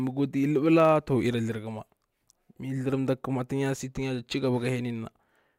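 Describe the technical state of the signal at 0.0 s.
At 0.0 s the speech already carries a steady 100 Hz buzz, and it persists across the whole clip while the talking keeps its normal pace and pitch. This is a block size mismatch (truncated): one processing stage hands on blocks slightly longer than the next stage reads, so the tail of every block is discarded. Those regular cuts, a hundred per second, form the buzz, and so little is dropped that the speed is effectively unchanged.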